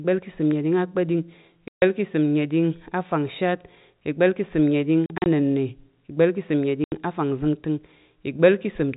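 Packets in this speech clip were dropped on the way and the receiver put silence in their place, a packet loss filled with silence. The gaps are 140 ms at 1.68 to 1.82 s, a scattered 100 ms spread across 5.06 to 5.26 s with no hole longer than 40 ms, and 80 ms at 6.84 to 6.92 s. All are multiples of 20 ms, which fits 20 ms packets. Each hole chops the speech with hard edges over the narrow, 4 kHz-limited telephone sound of G.711.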